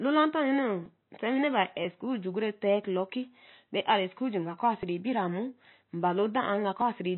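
Across the whole speech clip the sound is dull and watery, with nothing above 4 kHz and a swirly, smeared texture on consonants. That points to MP3 compression at a low bitrate, likely around 24 kbps, where the encoder cuts the treble and drops weak frequency content frame by frame.

Tiny skips interrupt the speech at 0.86, 1.85, 3.84, 4.83 and 6.81 s, each a jump of only a few milliseconds. Their spacing in steps of roughly one second likely reflects audio missing between chunks, lost as each one-second block closed and the next opened, with the two sides butted together.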